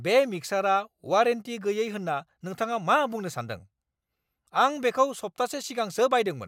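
Nothing in this recording trips up the ear; the speech just carries on with no dropouts, glitches or other technical trouble along the way.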